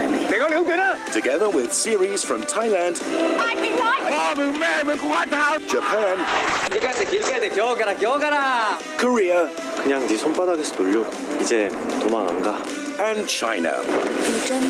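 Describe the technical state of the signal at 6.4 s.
At 6.4 s the sound is dull and rough, with the top end gone above about 8 kHz and a watery, smeared texture. This is a call bitrate drop running from 6.28 to 7.47 s, lowest for about 1.06 s. The bandwidth estimate fell and the encoder was starved of bits, which fits a fall from roughly 32 kbps to about 9 kbps. It coded more coarsely and narrowed its band from 20 kHz to 8 kHz.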